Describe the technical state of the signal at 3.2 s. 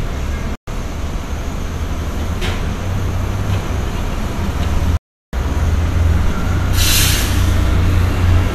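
The signal is intact at 3.2 s, with no audible fault at that moment.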